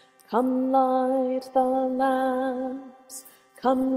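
Adaptive stream at a lower bitrate, from 1.39 s to the end: quality falls abruptly with no gap, as the stream switched to a cheaper encoding. Codec artefacts rise, which fits a step from Opus at 64 kbit/s to 16 kbit/s.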